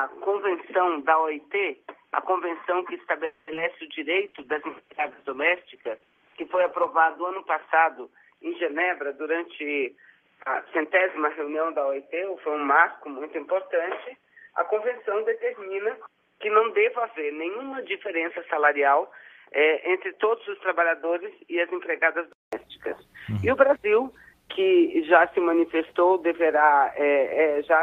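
From the start until 22.53 s the input was likely switched to a poorer device, such as a headset in its call profile. Nothing reaches above 3.4 kHz, so the sound is narrow and boxy. It sits roughly 5 dB lower, with the device's own faint noise about 50 dB under the signal. At 22.53 s a silence of about 0.2 s marks the switch back, and the band then opens out to the call path's usual Opus ceiling near 12 kHz.

From 3.25 to 3.49 s comes a call audio freeze, probably caused by delayed packets leaving the jitter buffer empty. The receiver bridges the wait by stretching the last sound for about 220 ms into a fading buzz or hiss with no true silence. When the packets arrive, the audio picks up exactly where it stopped, so nothing is lost, but everything afterwards runs 220 ms later.

Right after, two short concealed packet losses follow back to back, at 3.53 to 3.56 s and 3.56 to 3.59 s. In each, about 20 ms of audio never arrived and the decoder patched roughly 10 ms by extending the preceding sound before blending back. 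The result is a brief smeared wobble.

A call bitrate drop runs from 4.11 to 7.52 s. The bandwidth estimate fell and the Opus encoder went from 32 kbps down to 11 kbps, holding the lowest rate for about 2.8 s. It also narrowed its audio band from 12 kHz to 8 kHz. The coarser coding makes the sound rough and watery, and the top end goes muffled until the rate recovers.

From 9.17 to 11.07 s a jitter buffer speed-up plays the audio at 109% speed. The buffer had built up more delay than its target, so the receiver trimmed repeated pitch-period-sized slices, about a fifth of a second in total. Pitch stays put, but the pacing turns noticeably hurried.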